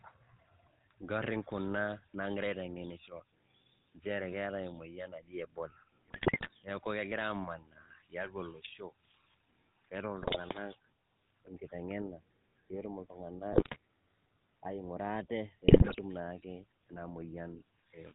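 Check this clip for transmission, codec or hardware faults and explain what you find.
Two faults are present: the whole recording carries plainly audible GSM full-rate codec damage, and four short bursts of GSM bit errors break through it.

GSM full-rate codec, throughout: The speech is rebuilt from a vocal-tract model driven by sparse, regularly spaced pulses, which fits the 13 kbps full-rate coder. It sounds buzzy and gravelly. A spectrogram shows nothing above 4 kHz and coarse, smeared harmonics.

GSM bit errors at 6.08–6.49 s, 10.22–10.37 s, 13.52–13.76 s and 15.68–15.96 s: Corrupted filter, pitch or gain values reach the decoder, so frames come out with bent spectra or sudden level jumps. You hear squawks, pops and gargling. The waveform shows abrupt spikes, and the spectrogram shows blotchy, misplaced energy.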